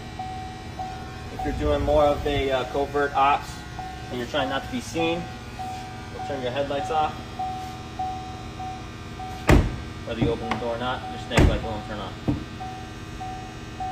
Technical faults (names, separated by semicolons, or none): call bitrate drop